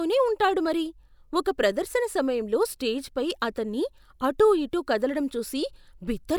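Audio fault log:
No faults heard anywhere in the speech.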